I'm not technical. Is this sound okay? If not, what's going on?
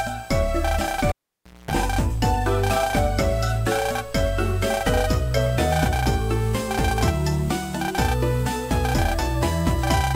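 No. At 1.09 s there's a cable pulled and plugged in: a pop, then about 0.57 s with the cable out, mostly near silence but including roughly 0.23 s of 60 Hz mains buzz as the plug's tip touches first, and another pop as the sound returns at 1.71 s.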